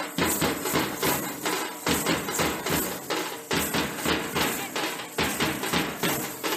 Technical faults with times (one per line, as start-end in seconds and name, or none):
none